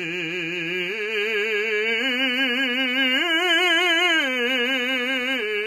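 HE-AAC compression runs throughout the music: nothing sounds above 14.8 kHz, and the treble turns gritty and metallic, likely rebuilt from copied lower bands at a bitrate near 20 kbps.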